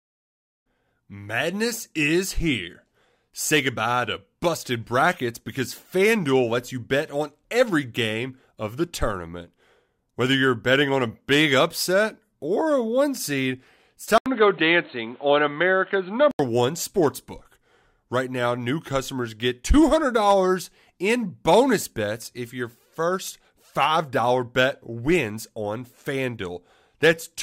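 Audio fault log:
14.18–16.39 s, input switched to a poorer device: right after "a one seed it's" there's an 80 ms gap, then the sound goes dull and boxy with nothing above 4.2 kHz and a new noise floor about 35 dB down. Likely a switch to a narrower-band mic, clearing before "one sports book".
21.29–21.53 s, DAB burbling: just before "bets if your first" you get a quarter-second of burbling, short blips of noise in individual sub-bands. That's bit errors slipping past error correction into the MP2 data, and the length fits roughly ten damaged frames.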